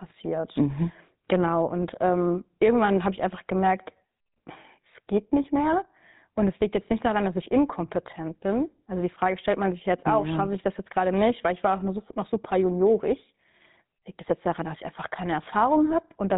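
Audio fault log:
Throughout, GSM full-rate codec: the speech has that gravelly, buzzy roughness you get from the original GSM phone codec, and it's plainly audible the whole way. The codec rebuilds the voice from a vocal-tract model fed by a sparse, evenly spaced pulse train instead of the real excitation, so the fine texture turns grainy and rasps. Nothing survives above 4 kHz, which dulls the top end, and the sound fits a 13 kbps GSM phone path.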